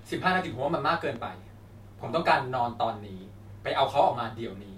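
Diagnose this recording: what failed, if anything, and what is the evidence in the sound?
A single loud pop hits at 1.16 to 1.19 s, peaking a few dB above the speech, which carries straight on underneath. That points to the analogue side, likely a voltage step from a connector, switch or static discharge, which the following circuitry shaped into one brief thump.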